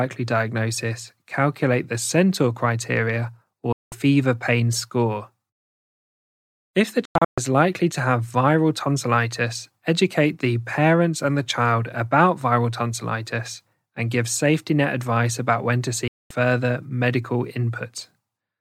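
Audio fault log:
3.72–3.93 s, 7.05–7.38 s, 16.08–16.31 s: digital broadcast dropout. The receiver lost good frames and muted, each time with a roughly 3 ms fade. The speech drops out for about 0.2 s before "pain score" and after "advice about when to". Before "likely to have viral" it breaks into several short holes, the longest 128 ms. Whatever was said during these gaps is lost.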